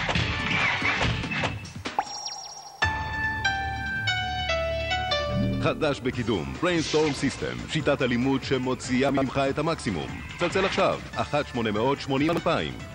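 At 9.09 to 9.22 s the audio jumbles briefly. These are chunks out of order. One chunk of about 43 ms plays two chunks late, after the audio that should follow it. Nothing is missing, but the sequence is scrambled and there are hard joins. At 12.29 to 12.37 s it happens again, one chunk late this time, giving a shorter garbled moment.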